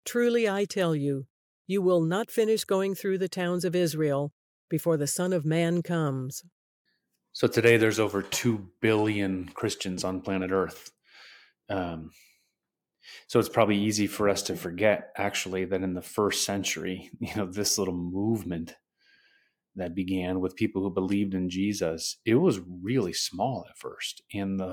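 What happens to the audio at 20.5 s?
Nothing goes wrong at 20.5 s; the speech carries on intact through that moment.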